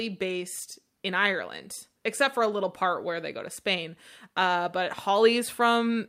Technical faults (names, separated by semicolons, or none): none